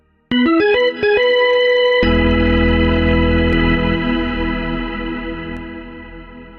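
From 3.53 to 5.57 s the sound is doubled: an identical copy follows about 200 ms behind, somewhat quieter, likely from a second out-of-step capture path.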